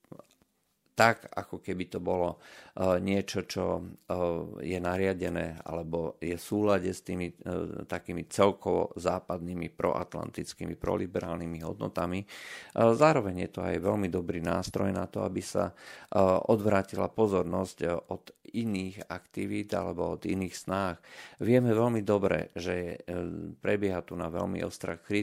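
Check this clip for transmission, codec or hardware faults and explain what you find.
Nothing in the recording points to a transmission, codec or hardware problem; the speech signal holds steady throughout with no audible interruptions or distortion.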